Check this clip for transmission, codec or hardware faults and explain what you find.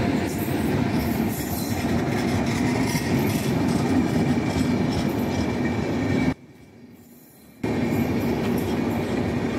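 One fault: from 6.33 to 7.64 s the sound collapses by about 25 dB into a faint residue, likely from one channel inverted, cancelling shared content when summed to mono.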